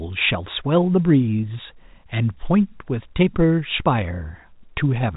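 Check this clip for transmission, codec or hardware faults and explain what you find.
Nothing stood out on listening to this speech clip, which carries the band limit of G.711 telephone coding with its top near 3.8 kHz.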